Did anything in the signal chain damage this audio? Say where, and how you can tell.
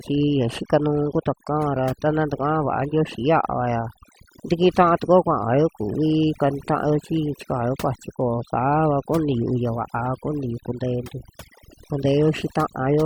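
Yes: overdone noise removal in the processing stage, heard throughout. Between phrases the background drops to near silence speckled with twinkling tones. Unlike codec artefacts, these come from individual frequency bands gated off wherever they resemble the noise estimate.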